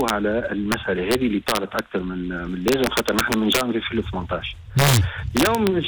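Integer overflow cracks at 0.01–0.10, 0.72, 1.11–1.79, 2.68–3.61, 4.79–4.97 and 5.37–5.67 s: peaks pushed about 2–3 dB past the limit wrap to the opposite sign, giving harsh snaps far nastier than clipping.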